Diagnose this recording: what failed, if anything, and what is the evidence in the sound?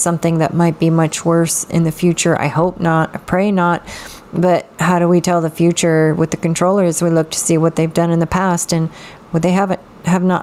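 Gain pumping runs through the whole recording: the gain ducks by around 10 dB under each loud sound, leaving the dynamics squashed. The likely cause is input gain set far too high, with a fast limiter pulling it down on every peak. A noise gate would cut the gaps towards silence instead.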